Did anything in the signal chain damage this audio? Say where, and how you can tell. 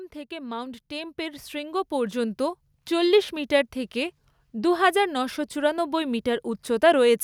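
Yes: the call-processing automatic gain rising from 0.28 to 3.62 s lifts the level by about 11 dB, so speech and background swell together.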